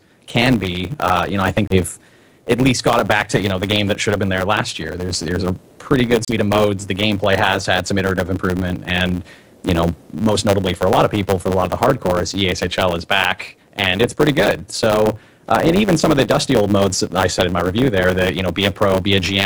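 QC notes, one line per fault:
Throughout: block size mismatch (truncated). One stage hands over longer blocks than the next one reads, so the tail of every block is discarded. Those regular cuts produce a steady buzz at 100 Hz, which fits 512-sample blocks being written. Because part of each block is lost, the audio plays about 1.07 times faster than it should. The pitch stays close to normal, since each kept piece plays at the correct rate.
1.67 to 1.76 s and 6.25 to 6.33 s: Bluetooth stall. At each point the sound drops to silence for about 32 ms and 34 ms respectively, then carries on. This is likely a wireless stall: interference held back packets, the headphone buffer emptied, and playback waited until the resent data arrived.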